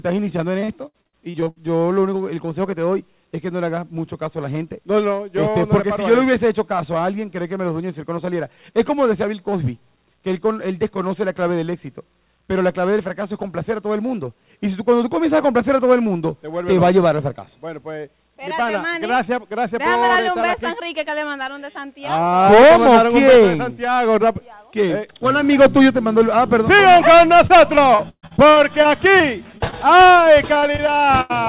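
Packets arriving lost or late on a call link are the root problem in this audio, which comes through a telephone-band path that stops at 4 kHz, consistent with G.711 A-law at 64 kbps. Repeated packet loss (robotic sound) hits three stretches: 0.6 to 1.68 s, with roughly ten holes of up to 59 ms and about a third of the span rebuilt; 27.47 to 29.22 s, with about ten holes, the longest 138 ms; and 30.55 to 31.32 s, with about five holes of up to 86 ms. In each stretch the receiver keeps patching one hole by extending the last sound, and the next hole arrives soon after. The result is a choppy stutter with pieces missing. Short concealed packet loss also occurs as two isolated drops, one at 29.58 s (about 20 ms missing) and one within 29.68 to 29.87 s (about 40 ms missing, with a few milliseconds of extra length). Each time the decoder carries the preceding sound across the gap and blends back into the real signal. 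This is heard as a brief smear or wobble, and a short sound inside the gap can disappear.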